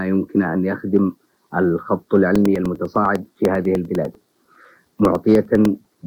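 From 2.36 s to 5.95 s, periodic USB or driver dropouts strike every 0.1 s: some background task stalls the audio path and a couple of milliseconds are replaced by silence. The resulting ticks, around forty, keep a strict rhythm, unlike random interference clicks.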